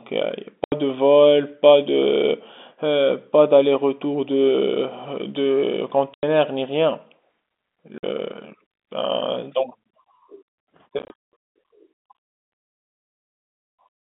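Hard-edged dropouts cut the speech at 0.64–0.72, 6.14–6.23 and 7.98–8.03 s, then scatter through 10.99–11.33 s. This is packet loss filled with silence, with gaps in steps that fit 10 ms packets.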